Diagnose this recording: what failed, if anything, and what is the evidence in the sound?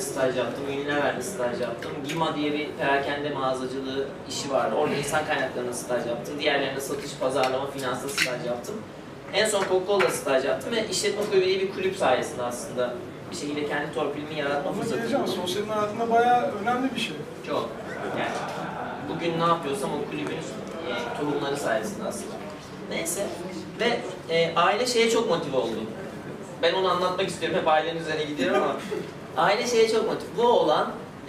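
Nothing failed here as far as I can hear: no stage in the chain, from the wiring through to playback, leaves any audible mark on the sound.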